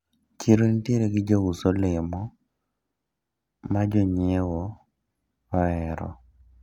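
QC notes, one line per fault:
No faults heard anywhere in the speech.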